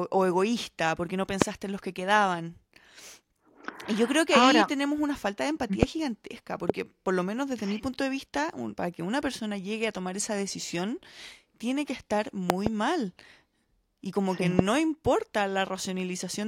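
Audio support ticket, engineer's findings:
Loud pop: sharp single pops at 1.42 s (after "egoísta porque no"), 5.83 s, 6.70 s, 14.59 s (after "como que"); double pop 12.50–12.69 s after "decisión tiene que estar". Roughly 20–25 dB over speech, which continues underneath, unlike a dropout. Likely voltage step from plug, switch or static.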